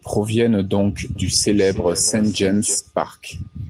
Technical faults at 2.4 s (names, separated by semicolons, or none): feedback echo between two devices